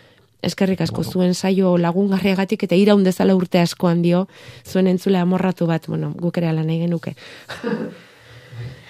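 A speech recording whose sound turns suddenly roomy and hollow at 7.58 s, right after "gukerea lan egin nuke," and stays that way to the end: thinner bass, a drop of about 5 dB, and more audible room noise. The likely cause is a switch to a distant microphone.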